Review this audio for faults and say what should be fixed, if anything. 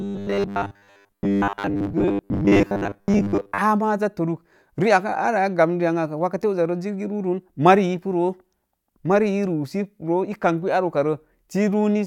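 From 0.01 to 3.61 s the speech turns into a rigid, metallic 100 Hz buzz that only loosely follows the words: robotic sound from repeated short buffers. Audio likely arrived too seldom, so roughly 70 percent of that stretch replays a 10 ms block. Enlarging the playback or jitter buffer so playback never starves would prevent it.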